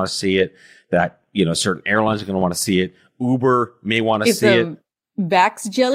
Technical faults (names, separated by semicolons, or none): clock slip clicks